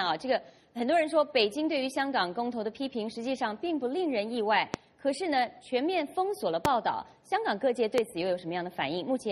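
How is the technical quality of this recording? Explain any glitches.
The recording has three loud pops, at 4.74–4.77 s, 6.65–6.68 s and 7.98–8.01 s. Each is a single sharp pulse far louder than the sound, likely from a plug, switch or static spike, and the audio continues underneath rather than dropping out.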